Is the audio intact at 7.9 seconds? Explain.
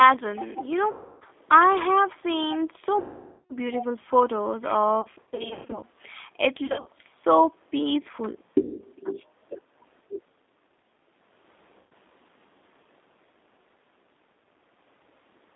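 No. At 7.9 seconds, as across the whole clip, the speech carries plainly audible G.729 codec damage. The voice is rebuilt at about 8 kbit/s from a vocal tract filter, a pitch predictor and a few pulses per frame, within roughly 250 Hz to 3.7 kHz. Unlike simple band-limiting, which would only sound muffled, this gives a rough, synthetic buzz.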